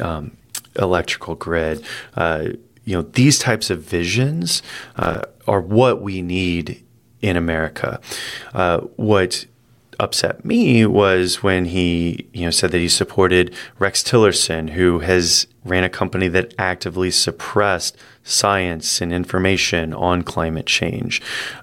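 From about 4.52 to 5.24 s there's processor overload crackle, right before "are what we need". The processor kept missing deadlines on buffers of just a few milliseconds, about thirty of them, each leaving a hard-edged gap of silence, so you get a gritty tearing burst.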